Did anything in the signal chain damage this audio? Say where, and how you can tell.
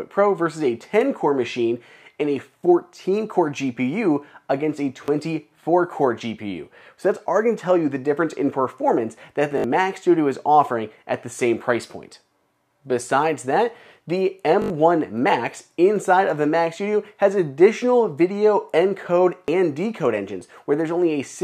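Yes, repeated buffers at the driver or buffer stage: at 5.06 s, 9.58 to 9.64 s, 14.62 to 14.70 s and 19.46 s. Each is a short stutter where one tiny slice of sound plays again with a hard join. The repeat period fits a 20 ms buffer. Fresh samples weren't delivered in time, so the output replayed its last block. The two longer stutters loop several times and drop roughly 70 ms of audio each.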